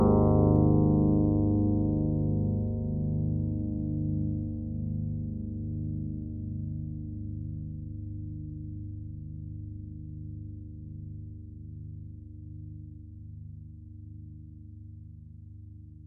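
From 0.56 s to 15.92 s there are faint clock slip clicks, a tick roughly every half second, likely from two unsynced clocks about 40 ppm apart.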